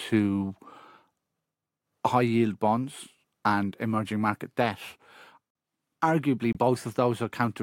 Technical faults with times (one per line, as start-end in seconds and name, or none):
5.50-5.55 corrupt frame muted
6.53-6.57 corrupt frame muted